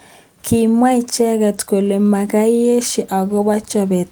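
Nothing stood out on listening to this speech recording.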